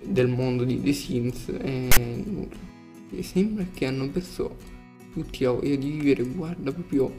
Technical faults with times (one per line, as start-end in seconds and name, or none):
1.92-1.97 file tags played as audio